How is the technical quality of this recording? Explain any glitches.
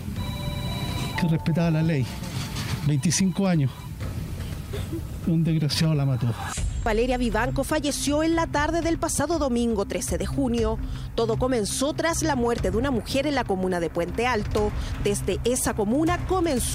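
No glitches or technical faults can be heard anywhere in the recording.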